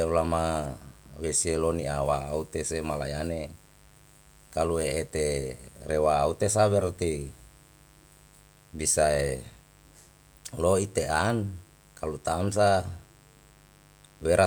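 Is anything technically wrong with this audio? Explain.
Yes. Mains buzz runs throughout. Sharp switching spikes, twice per 50 Hz cycle, spread harmonics into the kilohertz range, producing a steady, raspy buzz about 30 dB below the speech.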